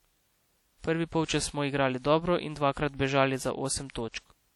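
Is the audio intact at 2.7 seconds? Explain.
No. At 2.7 seconds the speech carries a ringing, washy smear with a hiss that swells and fades along with the signal, and this damage is plainly audible and runs throughout the clip. The likely cause is WMA compression: the transform encoder spreads its quantisation noise over tens of milliseconds around each sound and drops weaker spectral detail, which fits an early WMA encoder at a low bitrate near 48 kbps.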